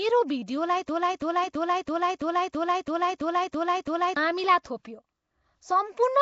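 Speech runs through plainly audible codec damage, with a rough, hissy, smeared underwater character and nothing above 7.7 kHz, likely Nellymoser compression at about 32 kbps. From 0.89 s to 4.17 s a broken-record loop repeats one 332 ms fragment exactly, ten times back to back. The stream likely stalled and resent its last buffer, so the audio for that span is lost.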